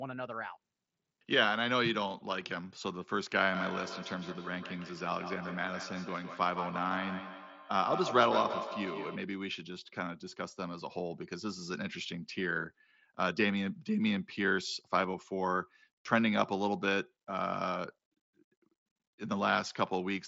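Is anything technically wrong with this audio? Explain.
Yes. Feedback echo between two devices, 3.54 to 9.37 s: a second device in the room replays this microphone's sound, which is recaptured. The echo canceller ignores that playback, so speech returns roughly every 150 ms, peaking about 7 dB below the speech. The audio also passes through an mSBC Bluetooth headset codec, so nothing is heard above about 7.7 kHz.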